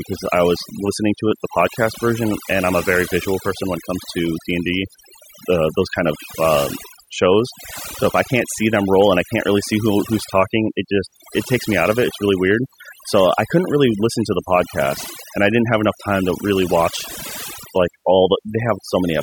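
Overdone noise removal runs throughout: bands near the noise floor are cut or switched off, taking quiet parts of the speech with them. Pauses go near silent with twinkling specks, flickering band by band, unlike a gate's whole-signal shutoff.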